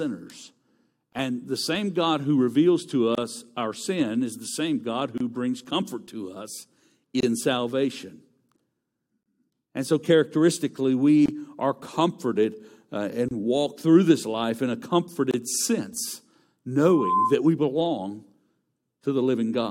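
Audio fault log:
1.13, 3.15, 5.18, 7.20, 9.23, 11.26, 13.28 and 15.31 s, gap at a join of encoded pieces: every 2.0 s the speech drops out for roughly 25 ms, e.g. after "who reveals to". The pieces were encoded separately and butted together untrimmed, so encoder delay and last-frame padding leave short, slightly smeared holes before the speech resumes.
16.84–17.37 s, loudspeaker feedback squeal: a 1 kHz tone swells over about a third of a second until it sits around 5 dB above the speech. The mic is hearing its own loudspeaker, and at that frequency the loop gain has tipped past one, so it keeps feeding itself.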